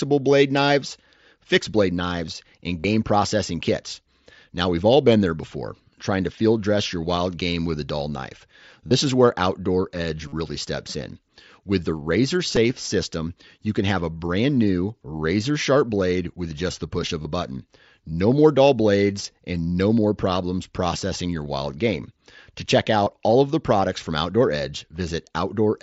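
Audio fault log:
2.80 s (after "fixed blade knives and"), 8.88 s (after "with a dull knife"), 10.28, 12.56, 17.22, 23.04 s (before "all of the products"), concealed Bluetooth headset packet loss: gaps of 7.5 to 45 ms are filled by repeating recent waveform rather than silence. Longer runs give a brief buzzy held tone, and a slight warble where real sound returns.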